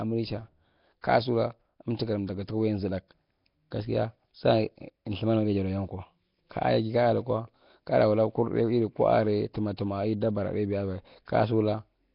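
From start to finish the speech has a rough, hissy halo and a smeared, underwater feel, and nothing comes through above about 5.3 kHz. That points to heavy damage from what is likely Nellymoser compression, the old Flash microphone codec, at a rate that fits roughly 22 kbps. It codes short blocks with very few bits, so weaker bands get no bits at all and are filled in with noise, which is where the fizz and murk come from.

At 9.77 s there's a pre-echo: a brief smear of hiss, about 16 ms, just ahead of a sharp attack, which itself sounds softened. The block-based coding spreads its quantisation noise across the whole block, so noise sized for the loud onset also lands in the quiet moment before it.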